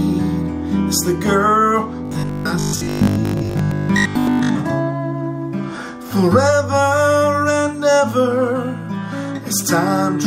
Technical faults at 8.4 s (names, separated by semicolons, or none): none